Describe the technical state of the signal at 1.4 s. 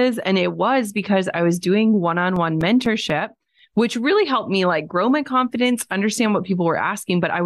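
At 1.4 s the speech signal is intact, with no audible technical fault at that point.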